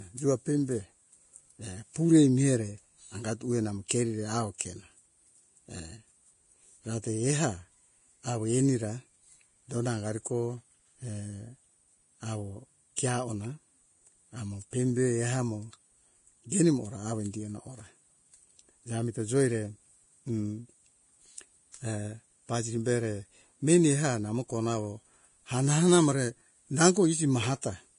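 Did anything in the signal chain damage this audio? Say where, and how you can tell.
Yes, at the codec stage. The speech is hissy and grainy throughout, with nothing above 10.6 kHz. This heavy damage is likely Vorbis compression at a low bitrate, around 31 kbps.

Pre-echo appears at 3.88 to 3.90 s, 4.58 to 4.60 s and 12.96 s. A brief hiss of about 20 to 26 ms precedes each attack, as block-wide quantisation noise spills ahead of it.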